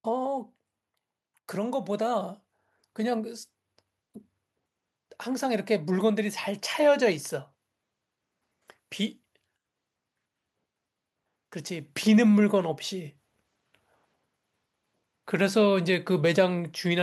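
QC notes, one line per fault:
1.54–3.39 s: automatic gain rising. Over nearly two seconds the level climbs by about 6 dB, and the speech and the background noise floor swell together rather than the speech alone getting louder. That shared rise is the signature of an automatic gain control that judged the input too quiet and ramped its gain up gradually, lifting everything in the signal path instead of responding to a change at the source.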